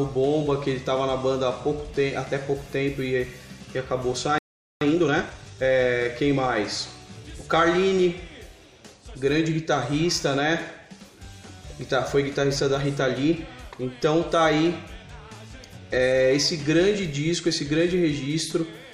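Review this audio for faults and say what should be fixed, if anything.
At 4.38 s the sound cuts to silence for about 430 ms, resuming at 4.81 s. This is a playback stall: the player's buffer likely ran dry or its audio thread was blocked, so nothing reached the output until it recovered.

From 4.81 to 5.65 s a time-compressed catch-up follows. The player trims its backlog by dropping small segments and cross-fading the joins. The audio runs at about 1.5 times normal speed without a pitch change.

Prevent both by enlarging the playback buffer or giving the audio thread higher scheduling priority so that data delivery never falls behind the output clock.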